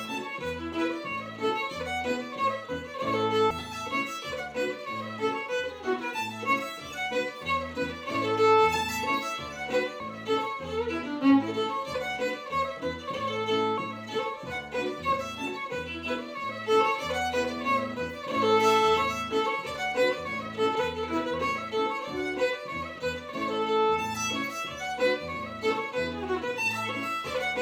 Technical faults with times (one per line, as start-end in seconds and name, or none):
3.50 compressed frames skipped
10.00 compressed frames skipped
13.77 compressed frames skipped
20.75 compressed frames skipped